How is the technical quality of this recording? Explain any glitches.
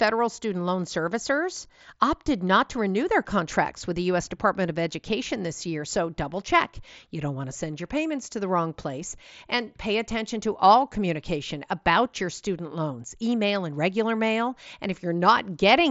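No glitches to report: the speech comes over a Bluetooth headset link with the mSBC wideband codec, so the top end stops at about 7.7 kHz, and nothing in the recording goes wrong along the way.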